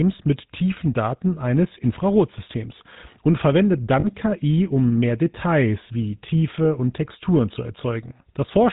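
A speech clip carrying the GSM full-rate codec throughout, with plainly audible damage. The codec models the vocal tract as a filter and excites it with a pulse train that retains only every third excitation sample. Coding at this coarse level, which fits the 13 kbps full-rate mode, gives the sound a buzzy, gravelly roughness. Nothing above 4 kHz gets through, so the top end is dull and band-limited. At 4.0 s, just after "und verwendet", lost GSM frames occur for about 64 ms, through 4.06 s. The decoder replaces the missing data by repeating the parameters of the last good frame, which holds the sound as a brief rough, metallic ring. The gap amounts to about 40 ms of missing audio, consistent with two 20 ms frames, too short for the concealment to fade fully to silence.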